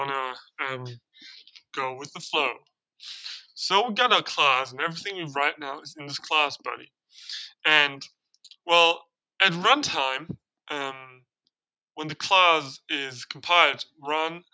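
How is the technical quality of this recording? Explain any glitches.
No glitches turn up anywhere in this recording, and it simply sounds like audio that went through a call's microphone processing, with the bass rolled off at the bottom as that processing normally does and nothing heard above 8 kHz.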